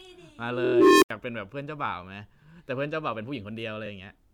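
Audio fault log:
0.47–1.10 s, unstable filter: a tone near 400 Hz swells over about 0.46 s until it clips, then drops to roughly 85 ms of silence while the runaway recursive filter resets. Unlike acoustic feedback, it ends abruptly.
0.64–0.73 s, repeated frames: one 24 ms block, consistent with a single compressed frame, plays four extra times, causing a rhythmic stutter and adding 96 ms.
3.85–3.88 s, repeated frames: one 24 ms block plays once more, a single hiccup that lengthens the audio by 24 ms rather than dropping anything.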